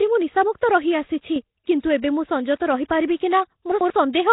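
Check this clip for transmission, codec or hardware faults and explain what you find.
Three faults are audible in the speech: codec damage across the whole recording, an abrupt level step, and a short jumbled passage near the end.

Throughout, the speech carries heavy codec damage: a rough, hissy halo and a smeared, underwater quality, with nothing above 3.9 kHz. This is likely Nellymoser compression, consistent with a rate around 16 kbps. Coarse fixed bit allocation leaves weak bands unfunded and fills them with noise. That noise fill sets it apart from plain low-pass band-limiting.

From about 1.36 to 1.44 s there is a sudden gain jump of about 6 dB. Speech and background noise step up together. The likely cause is digital gain applied without a ramp. Because the noise floor moves as well, it is distinguishable from the speaker simply talking louder.

Between 3.72 and 3.90 s, chunks are out of order. 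A block of about 93 ms plays one chunk late, after the audio that should follow it. Nothing is missing, but the sequence is scrambled across three hard joins. Because no audio is lost, this differs from a dropout or gap.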